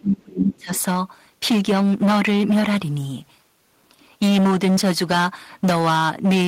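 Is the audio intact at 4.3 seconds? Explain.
No. The speech is driven about 12 dB past what the signal path can carry, causing hard clipping throughout; around a sixth of samples are flattened, giving a harsh fuzz at 4.3 seconds.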